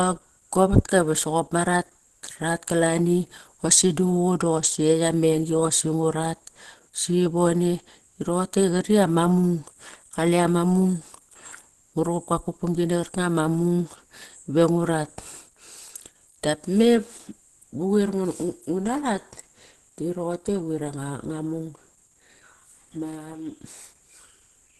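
Throughout the clip, the speech carries Opus compression artefacts, likely from a low-bitrate Opus encode in its hybrid speech mode. The voice sounds muffled, hoarse and grainy. On a spectrogram, energy stops sharply near 12.1 kHz, with smeared, noise-filled upper bands where harmonics should be.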